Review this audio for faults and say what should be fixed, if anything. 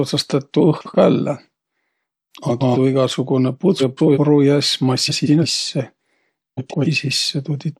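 Frames out of order occur at 0.78–0.96, 2.48–2.77, 3.80–4.18, 5.08–5.46 and 6.57–6.86 s. In each stretch, two adjacent blocks of the speech play swapped. The blocks are 85, 128 or 171 ms long, which fits runs of two to four frames. Each swap gives a brief garbled flutter. No time is lost. Fix it by reordering packets by sequence number in the jitter buffer before decoding.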